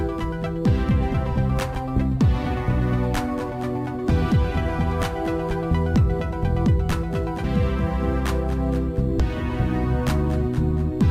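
Brief bursts of damaged data in a compressed stream occur at 1.74, 7.44 and 9.20 s, each only a few milliseconds long. At each point the decoder met corrupted bytes, misread the frame, lost sync and had to find the next valid frame header. The result is a brief chirp, squawk, click or short hole. A plain click from a sample-level discontinuity, by contrast, would be a broadband tick with no squawk-like colour.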